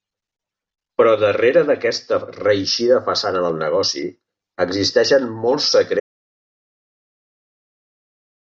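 At 6.0 s, right after "existeixen molts", the speech cuts off into dead silence with no room tone, and it stays silent to the end, about 2.5 s. This audio dropout to silence is likely from the input being lost while recording continued writing silence.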